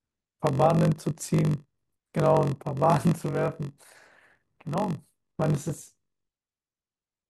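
Padded block size mismatch throughout: zero-filled gaps, fitting 1024-sample reads, make a 46.9 Hz buzz and slow the speech to 0.938x.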